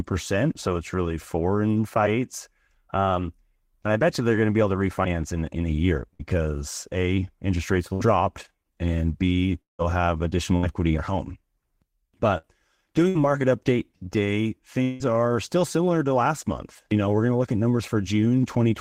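Bursts of packet loss interrupt this speech recording at 6.13, 7.93, 10.57, 12.38 and 13.09 s, each lasting about 0.09 s. In every case a short run of packets never arrived in time. The receiver filled roughly 55 to 60 ms by continuing and fading the last sound, which gives a brief buzz or hiss, and then speech resumes with about 60 ms of material gone. Long network dropouts likely account for the two longer gaps. At 9.61 to 9.82 s, about 170 ms of concealment fades into roughly 140 ms of silence, and about 180 ms of speech is lost. At 14.83 to 15.14 s, a similar 170 ms of fading fill covers another 180 ms of missing audio, with no silent stretch before the sound returns.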